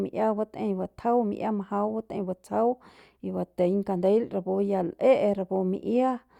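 No technical faults can be heard anywhere in this speech recording. Nothing interrupts or disturbs the sound at any point in the clip.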